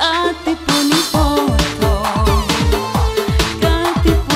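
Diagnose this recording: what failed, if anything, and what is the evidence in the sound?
What failed is the clocking on a digital link: these are word clock ticks. From about 0.45 s to 4.30 s there's a sharp tick roughly every half second, around ten in all, and they aren't all equally loud. The receiving device is running on its own clock instead of locking to the sender's, off by a few tens of ppm. Each time the two clocks slip past each other, a single sample gets dropped or repeated, and you hear that as a tick.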